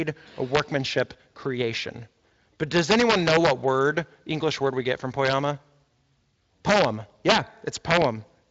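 Integer overflow cracks occur at 0.55–0.60 s, 0.98 s, 2.76–3.51 s, 5.25–5.33 s, 6.69–6.85 s, 7.29–7.38 s and 7.91–8.04 s. Peaks driven up to about 6 dB past full scale wrap to the opposite sign instead of limiting, producing violent snaps far harsher than clipping.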